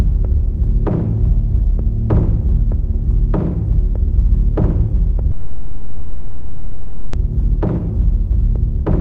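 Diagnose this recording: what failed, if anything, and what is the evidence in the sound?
Network: from 5.31 to 7.15 s a fading buzz or hiss replaces the sound, showing as flat spectrogram streaks, then it resumes intact. This is likely a call audio freeze from held-up packets.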